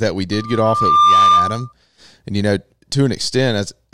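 A speech clip with loudspeaker feedback squeal from 0.32 s to 1.73 s. A steady 1.2 kHz tone swells over roughly 0.7 s to about 10 dB above the speech. The microphone is picking up its own loudspeaker, and the loop gain at 1.2 kHz exceeds one.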